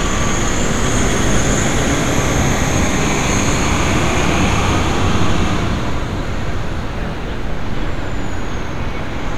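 No technical faults can be heard in this recording.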